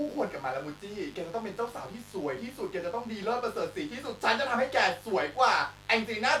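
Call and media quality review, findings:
Mains buzz throughout, roughly 25 dB under the speech. 50 Hz switching spikes, probably from a dimmer, rectifier or unshielded cable. Raspy kilohertz harmonics set it apart from a smooth low hum.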